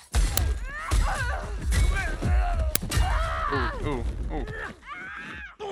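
A playback buffer was sent out before any audio had been written into it, twice in this clip, at 0.37 s and again at 2.75 s. Leftover memory was read as samples, so each uninitialised buffer comes through as a loud crack about 5 ms long.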